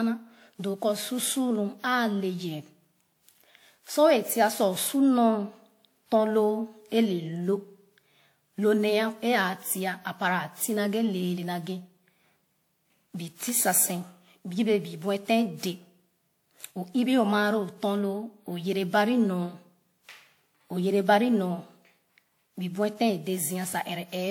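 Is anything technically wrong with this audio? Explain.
Yes, there's generation loss running through the whole speech clip. It has the swirly, hollow, smeared quality you'd get from something far rougher than its bandwidth suggests, since content still reaches up to about 20.1 kHz. Consonant attacks come out soft and blurred. The likely cause is a lossy codec applied over and over, around seven passes. The character fits WMA 1 at about 96 kbit/s. Each re-encode quantises on a shifted frame grid, so the noise stacks up.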